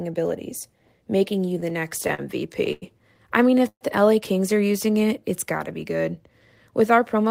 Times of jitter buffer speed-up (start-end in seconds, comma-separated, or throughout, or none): 6.71-7.30